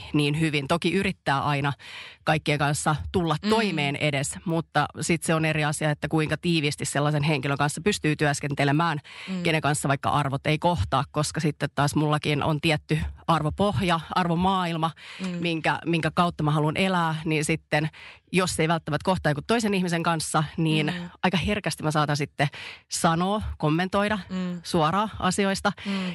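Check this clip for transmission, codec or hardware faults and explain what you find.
Regular ticks run through the whole speech clip, four per second, heard only while sound is present: a resampler restarted on every block. Each 250 ms block was converted separately, likely upsampling to 48 kHz, leaving a small error at every block edge.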